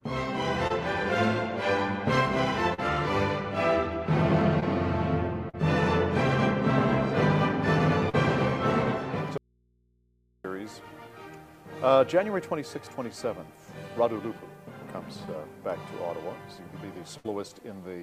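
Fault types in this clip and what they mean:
Short concealed packet loss: Six brief holes, at 0.67, 2.74, 4.60, 5.49, 8.09 and 15.25 s, each 20 to 40 ms of lost audio that the receiver patched by extending the preceding sound before blending back. Each one is a quick smear or wobble. Unlike a burst, the patch is too short to turn into a held buzz or fading hiss, and the sound resumes at once.
Audio dropout to a faint residue: From 9.38 to 10.44 s, just over a second, the sound cuts out abruptly and only mains hum remains, roughly 40 dB below the normal level. This is likely a break in the signal feeding a still-live input. It differs from packet loss because nothing is synthesised to cover the gap. Only the background hum of the open path carries on.
Burst of packet loss: At 17.17 to 17.26 s, about 80 ms of audio went missing in a row. The receiver stretched the last sound for about 70 ms while turning it down, giving a decaying buzz or hiss before playback picks up further along. 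It is longer than the short concealed losses, so the filler audibly fades, and unlike the dropout the gap holds imitated sound rather than hum.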